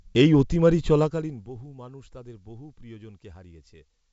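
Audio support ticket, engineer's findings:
Short pop with a rough, gritty tail at 1.30 s, between "এই অতিমারী" and "বহু মানুষ তাদের বহু", brief level jump. Bit errors on an ADPCM link, G.722 path, wideband intact up top, consistent with 64 kbit/s mode. Flipped bits throw decoder step size and predictor off, so damage rings past the hit. Sparse error rate, roughly 0.15 percent; burst length fits a couple of corrupted frames.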